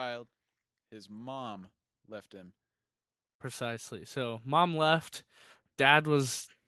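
From 0.9 to 2.62 s, automatic gain rising lifts voice and background together by about 4 dB. It happens again from 3.38 to 5.13 s, by about 7 dB.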